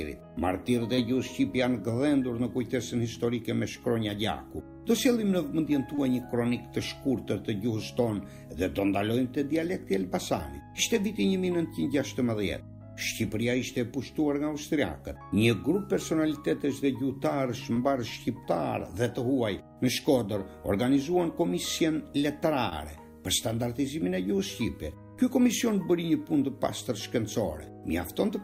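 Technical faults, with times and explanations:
0.95–0.99 s, 5.95–5.99 s, 17.73–17.77 s and 22.69–22.73 s: short concealed packet loss. Each time about 20 ms went missing. The receiver extended the preceding sound to fill the gap, leaving a brief smear or wobble.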